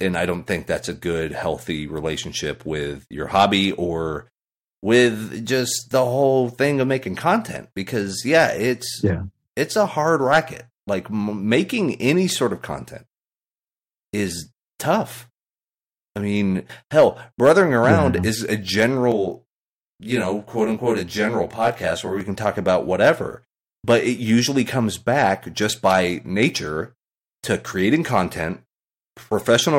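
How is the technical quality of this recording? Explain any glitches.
The recording has one technical fault, a short passage of channel delay with comb filtering.

From 19.1 to 22.2 s, after "around yeah is a" and before "can talk about whatever", one channel runs around 20 ms behind the other, and the two are folded to mono. Content shared by both cancels at regularly spaced frequencies, starting near 20 Hz, so the speech sounds rough or slightly doubled. The notches stay fixed rather than sweeping, which rules out flanging, and the delay is too short to register as a separate echo.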